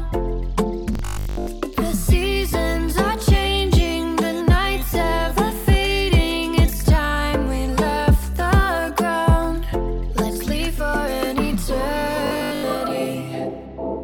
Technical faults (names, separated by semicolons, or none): robotic sound from repeated short buffers